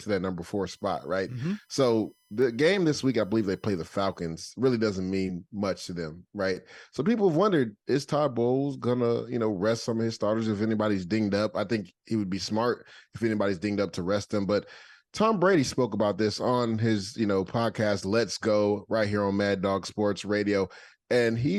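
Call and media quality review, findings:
USB whine, 0.67 to 4.28 s: low fixed-pitch whine under the speech, far below its level. USB bus current in 1 ms frames leaking via power or ground. Fundamental 1 kHz, harmonic comb strongest at 5 kHz. Spectrogram: thin horizontal lines at 1 kHz multiples, brightest at 5 kHz. Waveform: not visible.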